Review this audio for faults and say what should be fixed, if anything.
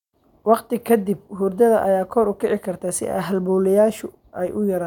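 No faults; nothing needs fixing.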